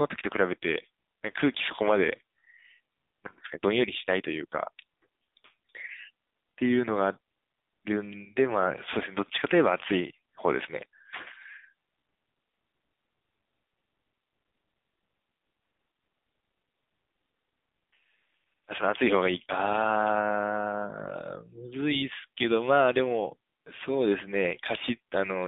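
Throughout, the speech has been squeezed through the AMR narrowband mobile codec, which rebuilds each 20 ms frame from a vocal-tract model and sparse pulses. Only 200 Hz to 3.7 kHz survives, and the plainly buzzy, synthetic tone fits a bitrate near 7.4 kbps.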